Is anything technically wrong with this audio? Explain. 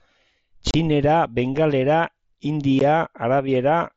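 Yes. Unconcealed Bluetooth headset packet loss cuts the speech at 0.71 to 0.74 s, about 30 ms, and again at 2.79 s for about 15 ms. Those lengths fit 7.5 ms frames that never arrived from the headset. Nothing was filled in, so abrupt silent holes have sharp edges. On the waveform they look like flat gaps, and on the spectrogram like vertical blank stripes. The mSBC link carrying the speech limits content to 8 kHz and adds light graininess.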